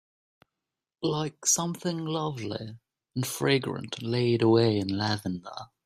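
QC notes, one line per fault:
No faults found on this speech clip.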